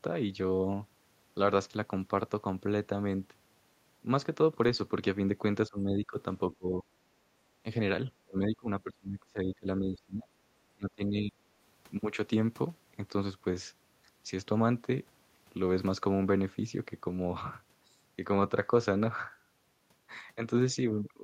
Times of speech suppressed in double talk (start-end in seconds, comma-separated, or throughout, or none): 5.69-6.17, 6.49-6.86, 8.08-10.28, 10.76-11.35